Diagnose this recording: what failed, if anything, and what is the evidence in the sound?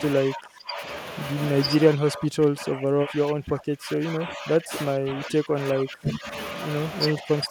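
The speech repeatedly dips and breaks up in four stretches: 0.24 to 0.82 s, 1.95 to 4.73 s, 4.94 to 6.34 s, and from 7.18 s to the end. The level drops by roughly 15 to 25 dB, deepest in the long middle stretch. On a waveform the envelope collapses in uneven chunks, and a spectrogram shows the energy fading in blocks. This is likely speech suppressed in double talk, a call-processing fault. The echo canceller could not separate this talker from far-end echo and attenuated both.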